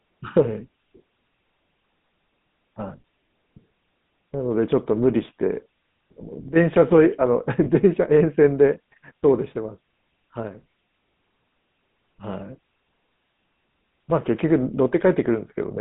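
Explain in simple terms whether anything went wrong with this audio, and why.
Two things went wrong, one lasting the whole clip and one brief.

The speech has passed through the GSM full-rate codec, the old mobile-phone coding. It rebuilds each voice from a simple model of the throat and mouth driven by a sparse pulse train, so the sound is buzzy and gravelly, with nothing above about 3.7 kHz and little below 150 Hz. A plain narrowband phone line would sound muffled but smooth; here the roughness itself gives the codec away.

There are also lost GSM frames between about 7.64 and 7.67 s, where a single short stretch of the signal went missing. The decoder filled the gap by repeating the last good sound, so you hear a brief rough, metallic ring rather than silence or a click. A simple dropout would leave a hole or a tick; this held, ringing tone is the frame-repeat trick at work.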